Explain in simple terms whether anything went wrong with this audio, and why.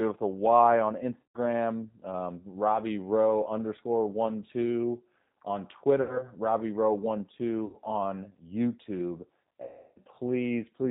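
The speech passed through the G.729 codec, which rebuilds each short slice from a simple voice model and drops everything above 4 kHz, so it sounds muffled, rough and synthetic.

VoIP packet loss concealed by the speech codec occurs at 1.24–1.39 s, 6.02–6.26 s (right after "underscore one two on"), 7.65–7.77 s and 9.62–9.99 s, where the decoder fills the gaps with fading guesses stretched from the last bit of voice.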